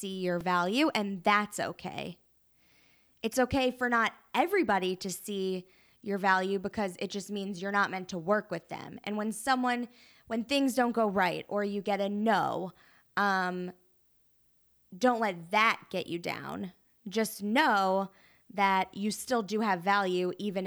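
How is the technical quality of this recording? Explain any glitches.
There's one glitch worth flagging. At 0.41 s, just before "value and that's okay", there's a repeated buffer. Fresh audio arrived late, so the last 2.9 ms chunk played twice more, which fits a 128-sample buffer. You hear it as a brief click or buzz.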